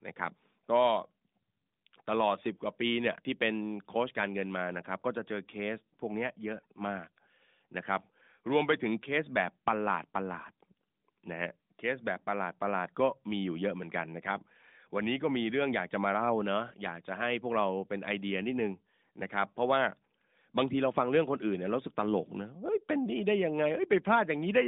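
Nothing is technically wrong with this speech recording, which has the narrow telephone-band sound of a mobile call.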